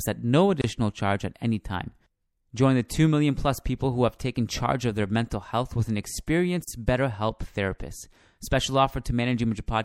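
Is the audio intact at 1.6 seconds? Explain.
No. At 1.6 s the speech carries MP3 compression damage throughout, likely from a low bitrate near 64 kbps. Starved frequency lines swirl watery.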